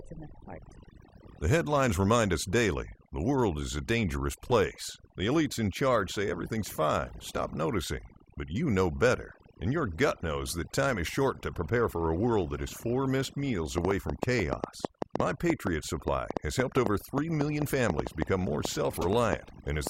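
A noise reduction stage set far too strong runs through the whole speech clip. This is overdone noise removal: it cuts frequency bands that sit near its noise estimate right down, taking quieter parts of the voice with them. The background drops to near silence dotted with twinkling specks.

At 4.51 s, just after "world is a dangerous", a corrupt frame was decoded. The decoder played a compressed frame with flipped bits, and misread gains put energy at the wrong frequencies for the length of that single frame. It comes through as a short chirp or blip, peaking around -20 dBFS.

From 13.78 s to 19.88 s, just after "is four missed meals", a train of clicks runs over the sound, likely from interference or a faulty connection injecting pulses. About 30 clicks of similar shape arrive at an uneven pace, roughly five per second, popping well above the voice and in the pauses too.

Within that stretch, from 18.93 s to 19.06 s, another corrupt frame decoded error spans what sounds like several consecutive damaged frames. 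Misplaced spectral energy across them produces a louder, longer squeaky burst of noise than the one at 4.51 s.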